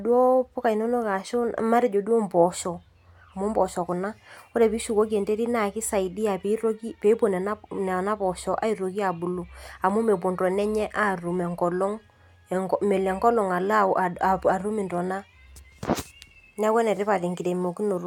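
Two sharp, isolated clicks cut through this speech clip, at 9.90 s and 14.98 s, each a single tick with nothing audibly missing around it. Both are likely dropped samples, where a fraction of a millisecond vanishes and the waveform jumps abruptly.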